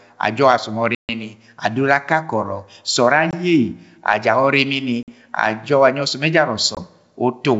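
Speech, carried over what sounds like a wideband G.722 link, hit by packet loss on an ADPCM call at 0.95, 3.31, 5.03 and 6.75 s. The first hole is the big one: 140 ms gone, about fifteen packets' worth, then 50 ms at 5.03 s and 20 ms at the other two. Each is a hard-edged silence, and once audio resumes the speech is briefly slightly distorted while the decoder's predictor and step size drift back into line with the sender's.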